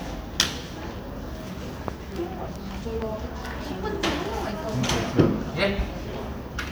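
A loud pop occurs at 1.88–1.90 s, about 20 dB above the surrounding audio, then a second, weaker pop at 3.02–3.04 s, roughly 10 dB up. Each is a single sharp click with the sound continuing underneath, likely from a brief voltage pulse such as a switch or static discharge.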